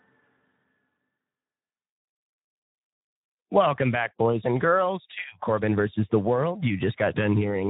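From start to finish the speech carries Speex codec damage, plainly audible: a hoarse, noisy buzz riding on every syllable, which fits a low setting near 11 kbps starving the CELP excitation of bits. Nothing sounds above 3.8 kHz, and unlike a simple low-pass filter, the grain sits inside the voice itself.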